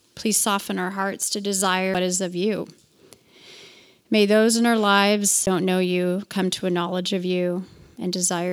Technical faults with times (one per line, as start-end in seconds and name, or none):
1.94 CD skip
5.46 CD skip